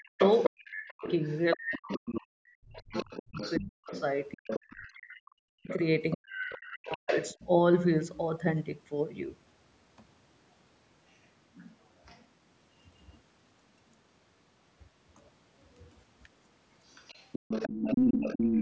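A speech recording carries a second voice as other side's voice leaking through, at 0.0–2.21 s, 2.76–4.91 s and 5.68–7.47 s (about 10 dB under the main talker), briefly at 11.54–12.25 s (far quieter, around 25 dB down), and at 16.86–18.61 s, where it is about as loud as the talker. The likely cause is a loudspeaker feeding the far end back into the microphone with the echo canceller leaving residue. On a spectrogram this shows as a second set of harmonic stripes and formant bands overlapping the main ones, cut off at the 8 kHz top of the call band. Overlapping those early leaks, speech suppressed in double talk hits 0.02–3.91 s and 4.93–7.36 s, where the talker dips by as much as roughly 40 dB. This is likely the canceller failing to separate near and far voices and ducking both. The waveform envelope shows sudden notches, and the spectrogram shows the talker's bands thinning or going blank.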